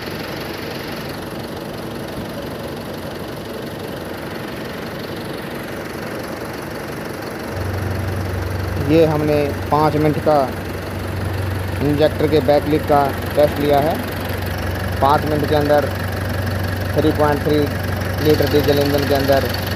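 No technical fault can be heard anywhere in the audio, and the signal holds steady throughout.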